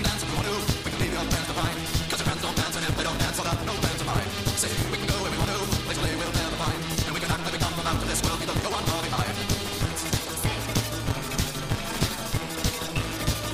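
Throughout the clip, a block size mismatch (truncated) is audible. One stage passes along longer blocks than the next stage takes in, so the tail of every block is discarded. Each cut leaves a seam, and the seams repeat as a steady buzz at 172 Hz, which fits reads of 256 samples. Because so much is dropped, the sound runs about 1.88 times too fast. Its timbre stays close to normal.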